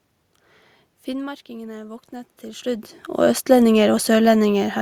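Automatic gain rising from 1.06 s to 4.1 s: after an input drop of about 15 dB, the gain climbs about 6 dB, slowly swelling voice and room noise together.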